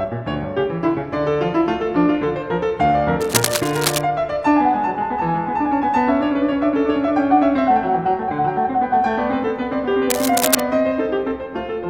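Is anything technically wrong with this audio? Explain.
Yes. The music carries cable scratch noise twice, from 3.21 to 4.02 s and from 10.10 to 10.60 s. Each time, dense, uneven bursts of scratching and rustling sit on top of the music, only about 5 dB below it. The likely cause is a worn cable, connector or control being moved. Its contact resistance then jumps about rapidly, and those jumps enter the signal as ragged noise.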